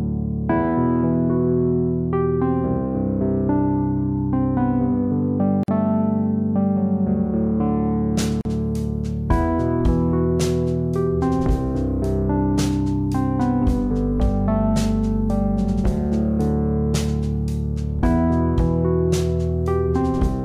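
At 5.63 s and again at 8.41 s the sound drops out for 48.5 ms and 40.4 ms, a gap at a join of encoded pieces. Separately encoded segments were butted together with their encoder delay and end padding untrimmed. Each is heard as a brief hole, and the waveform shows a flat run with softened edges, a vertical blank stripe on a spectrogram.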